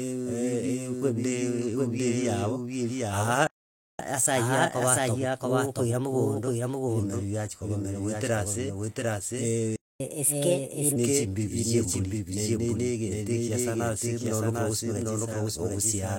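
A second copy of the audio is likely being mixed in from a slower capture path or a misaligned edit, producing a doubled audio track across the whole recording. The copy trails the original by roughly seven tenths of a second and sits at about the same level. Every phrase is therefore heard twice, full-band and dry, with no room colour. It sounds like a hard, flat echo rather than reverberation.

At 3.47 s the player likely runs out of buffered data or has its thread blocked. This playback stall cuts the speech off mid-flow and leaves about 0.52 s of silence until 3.99 s, when the sound resumes.

From 3.99 s to 6.99 s the player works through its backlog with catch-up at higher speed. It resamples the audio to run 1.1 times faster. Speech comes out slightly hurried and lifted by about a semitone and a half, then settles back to normal pace and pitch.

A second playback stall follows at 9.76 s, again likely from starved or blocked playback. 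The speech drops out for about 0.24 s until 10.00 s.

The recovery from 10.00 s to 10.96 s is more aggressive, at 1.25 times speed. For that stretch the speech is noticeably rushed and raised by about four semitones before it drops back.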